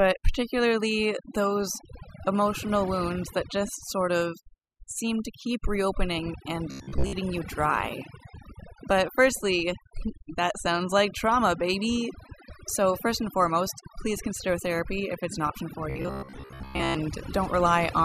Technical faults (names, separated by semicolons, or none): overdone noise removal; robotic sound from repeated short buffers